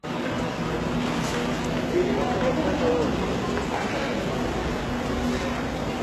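Throughout the clip, the encoding most likely went through HE-AAC compression at a very low rate, consistent with roughly 16 kbps. Only the lower spectrum was coded properly, and the treble was rebuilt by copying lower bands upward under a coarse envelope. The result is plainly audible damage. The top end keeps a bright sheen but isn't the real content, so bright transients sound gritty and metallic, and nothing remains above 12.3 kHz.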